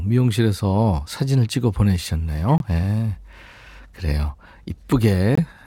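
From 2.26 to 4.01 s there's periodic clock jitter: something wobbling the converter clock around 1 kHz, smearing sidebands onto the speech and giving it a rough, metallic edge. Inside that stretch, at 2.58 s, a corrupt frame gets muted: the decoder rejected damaged data and a 40 ms hole drops in, probably two frames. Another, about 30 ms long, hits at 5.35 s.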